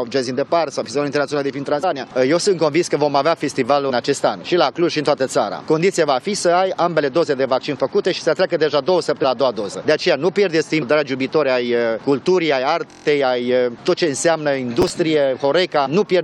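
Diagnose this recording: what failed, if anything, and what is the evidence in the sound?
Compressed frames skipped, heard at 1.82, 3.89, 9.23, 10.81 and 15.85 s. This is a codec or storage fault. At each point the audio jumps forward, losing roughly 100 to 200 ms. Each jump is a whole number of 23.2 ms frames, a frame length that fits a 1024-sample codec frame. The decoder never plays those frames, either because they are missing from the file or because it rejected them as corrupt.

System hang loop, from 12.91 to 13.05 s. This is a driver or buffer fault. A single 23.22 ms slice of audio repeats exactly six times. The repeats produce a rough buzz-like stutter at about 43.1 Hz, which fits a 1024-sample ring buffer. The host or driver stalled while the audio hardware kept replaying the same buffer contents. When the system recovered, playback resumed with roughly no audio lost.

Processor overload crackle, from 14.82 to 14.97 s. 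This is also a driver or buffer fault. A short burst of gritty crackle rides on the sound. About five buffers of roughly 5 ms each missed their deadlines. Each missed buffer was filled with stale, previously played audio, so hard-edged fragments were spliced into the stream. The crackle stops once the processing load eases.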